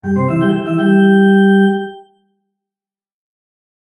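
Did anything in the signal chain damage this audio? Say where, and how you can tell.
Yes. A noise suppressor was applied to these sounds for the whole clip, at the call-processing stage. Held and fading material is pulled down by roughly 5 dB while attacks pass, so the level pumps and the tails thin out. The speech-tuned suppressor is treating steady content as noise.

A sound is also cut by the noise suppressor from 2.01 to 2.32 s. Over about 300 ms it sinks by up to about 19 dB. The suppressor classed that sound as noise and ducked it much harder than everything around it.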